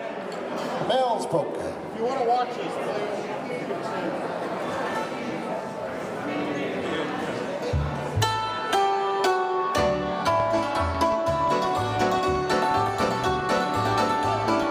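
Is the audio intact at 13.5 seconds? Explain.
No. A train of clicks runs from 10.4 to 14.64 s: around thirty alike pulses at a regular 5.7 per second, about 10 dB above the sound and ticking even through pauses, which sets it apart from random crackle. Likely cause: interference, or a faulty connection or power supply.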